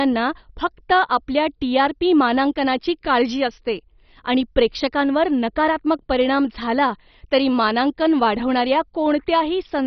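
Speech, heard through heavy MP2 compression from start to finish. Nothing sounds above about 6.1 kHz, so it is dull. A gurgling, granular roughness rides on it. Upper sub-bands were likely starved of bits and switched off, which points to a very low bitrate near 32 kbps.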